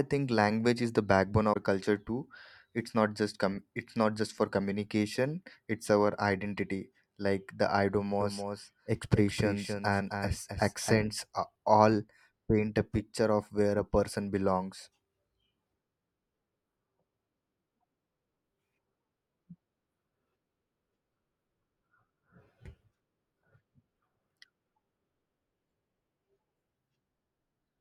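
At 1.50 to 1.57 s there is a brief glitch caused by damaged data in the compressed stream. Corrupted bytes make the decoder misread the frames, lose sync and hunt for the next header.

From 8.20 to 10.96 s the speech is heard as a doubled audio track. A full-band copy, about 5 dB quieter, trails the original by roughly a third of a second and cuts in and out abruptly. It is likely a second capture through a slower path. It differs from an echo or reverb because the copy has no decay and no room colour.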